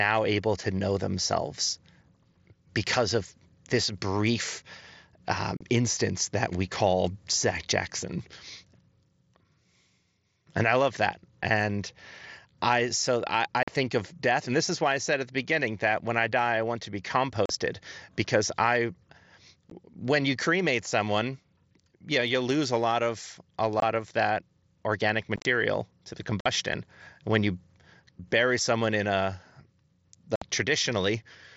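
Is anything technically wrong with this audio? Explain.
Yes. Unconcealed Bluetooth headset packet loss breaks the speech at 5.57 s (just before "instance that we call"), 13.63 s (between "I so I" and "think of death and"), 17.46, 19.70, 23.80, 25.36 to 25.45 (after "of that organic"), 26.40 and 30.36 s. Short voice packets between headset and phone went missing, and nothing filled the gaps. The result is abrupt holes of 15 to 60 ms that can click. At 25.4 s the losses scatter across 90 ms, so the sound turns briefly choppy and crackly. The speech passes through the wideband mSBC headset codec.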